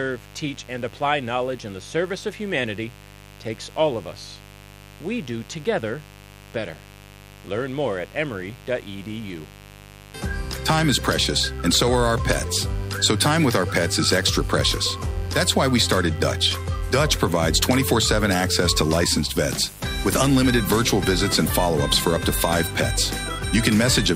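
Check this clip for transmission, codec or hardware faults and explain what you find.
One fault runs through the whole clip: mains buzz. A steady, raspy buzz sits under the sound from start to finish, around 20 dB below it. Its spacing points to a 50 Hz supply. Sharp switching spikes, arriving twice per mains cycle from something like a dimmer, a rectifier or an unshielded line, have leaked into the signal path. Their harmonics of 50 Hz stretch up into the kHz range, giving the buzz its edge instead of a smooth hum.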